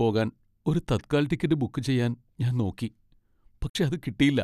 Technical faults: digital broadcast dropout

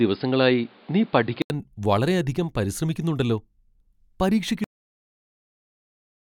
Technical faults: input switched to a poorer device; cut-off end

